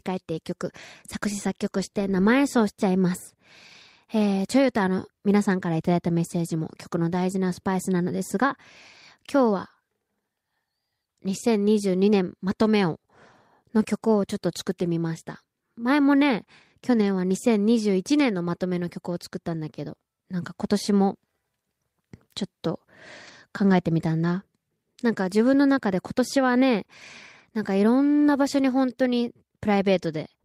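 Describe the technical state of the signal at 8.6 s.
Around 8.6 s the speech signal is intact, with no fault to be heard at that moment.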